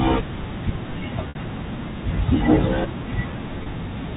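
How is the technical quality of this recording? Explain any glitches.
Two short glitches stand out in an otherwise telephone-band recording, which sits below 4 kHz as you'd expect from G.711 coding. Packet loss with pitch repetition hits at 1.29–1.35 s, covering 60 ms, and again at 3.63–3.66 s, covering 30 ms. The receiver looped the last pitch period to bridge each gap, so you hear a brief, held, buzzy tone. The first gap fits two lost packets, the second one.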